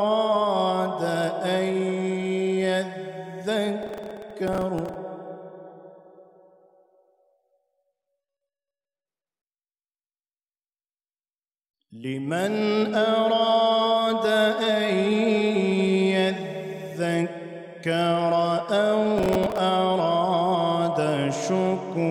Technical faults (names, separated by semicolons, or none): processor overload crackle